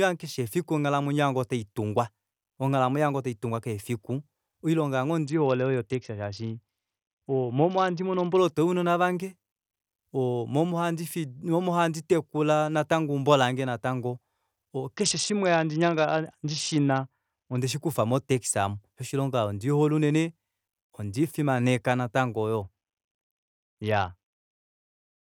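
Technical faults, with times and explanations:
5.26–8.38 s, 14.97–17.58 s and 22.62 s to the end: Bluetooth SBC bit pool drop. In each span the speech loses its treble and takes on a gritty, grainy noise; the first two clear when the rate recovers. The depth of the loss points to the bit pool falling from around 28 to around 7, roughly 66 kbps, as the link congested. So few bits were left that the upper sub-bands got few or none and the lower ones were coarsely quantised.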